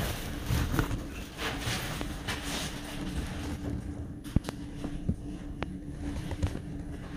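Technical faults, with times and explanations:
2.01–2.04 s, 4.36–4.51 s, 5.63–5.65 s and 6.47–6.58 s, loud pops: four bursts, with a single sharp pop at 2.01 s and 5.63 s and a quick double pop at 4.36 s and 6.47 s. They jump roughly 15 to 25 dB above the surrounding sound, which carries on underneath. Each is likely a voltage spike from a switch, a plug, static or a driver glitch, shaped by the following circuitry into a short thump.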